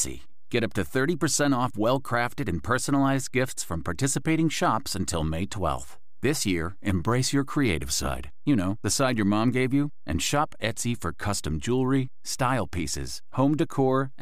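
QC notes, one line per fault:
Throughout: DC offset. Nothing distinct is heard, but the whole speech waveform sits shifted off zero by a constant of about -35 dBFS, which eats a little headroom and appears as steady energy at 0 Hz, the very bottom of the spectrum.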